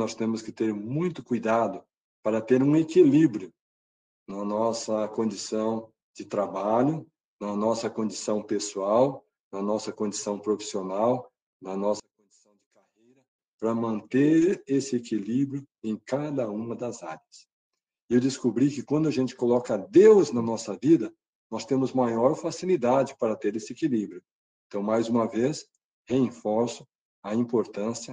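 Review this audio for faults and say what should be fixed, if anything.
From 12.00 to 13.39 s the sound nearly disappears, falling by about 37 dB to a faint remnant. The likely cause is one channel inverted: with one side's polarity flipped, everything shared by both channels cancels when they are summed to mono, leaving only their small differences. Checking channel polarity and monitoring a mono fold-down at each processing stage would prevent this.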